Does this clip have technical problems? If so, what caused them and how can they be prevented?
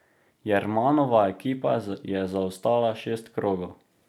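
No, nothing in this speech recording stood out as a technical problem on listening.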